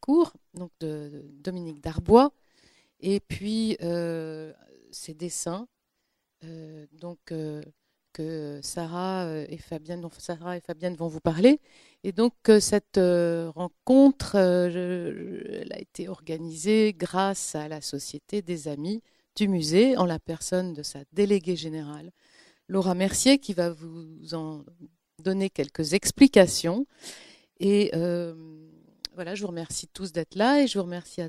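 No technical faults can be heard anywhere in this audio, and the signal stays steady throughout.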